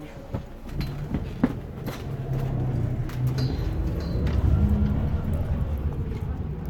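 Everyday sound, with no technical faults to be heard.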